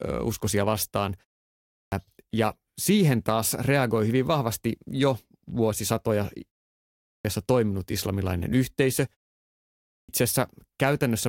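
Three times the speech has a clipped start after a pause: at 1.63 s after "uskosia vastaan", at 6.95 s before "toiminut islamilainen yhteisö", and at 9.79 s. After 0.47 to 0.72 s of silence, the sleeping output device wakes late, cutting about 0.3 s so speech lurches in.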